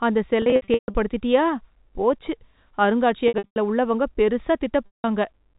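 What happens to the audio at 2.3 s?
Nothing goes wrong at 2.3 s: the speech carries on intact through that moment, with only the narrow, telephone-band character of the G.711 coding that runs throughout.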